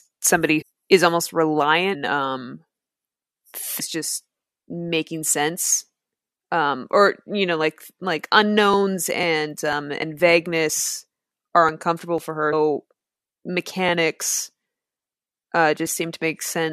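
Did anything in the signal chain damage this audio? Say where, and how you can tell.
Yes, damaged data in the compressed stream at the codec stage makes the decoder lose frame sync, giving brief glitches at 0.61 s (before "is almost"), 1.93–1.95 s, 3.79 s (before "just making sense"), 10.01 s and 12.52 s.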